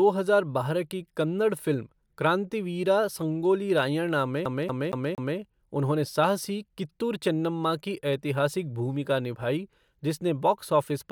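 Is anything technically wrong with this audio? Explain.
Yes. From 4.45 to 5.38 s the speech sticks like a CD stuck on one turn. A scratch keeps sending the laser back one track. The same 0.23 s slice plays four times. Each jump brings a brief mute. The result is a fast, even stutter.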